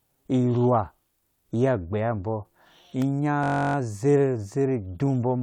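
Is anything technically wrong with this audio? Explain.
Yes, there are two faults in this speech. At 3.02 s an electrical switching spike adds a sharp snap, likely from a nearby switch arcing, layered over the speech rather than interrupting it. From 3.44 to 3.76 s a system hang loop repeats one 21.3 ms slice 15 times, which fits a 1024-sample buffer, giving a rigid 47 Hz buzz rather than random crackle.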